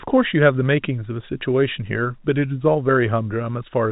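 No technical faults can be heard anywhere in the speech. The G.711 telephone coding gives the familiar narrow telephone band, with at most a faint hiss that rises and falls with the level.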